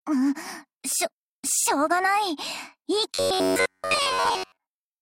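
From 3.14 s to the end at 5.01 s, the sound turns into a rigid, metallic buzz near 94 Hz that only loosely tracks the original: robotic sound from repeated short buffers. The likely cause is audio arriving too slowly, with a roughly 10.7 ms fragment looped for most of that stretch.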